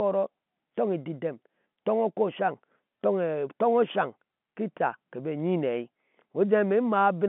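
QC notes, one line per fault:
No faults heard in this telephone-band speech.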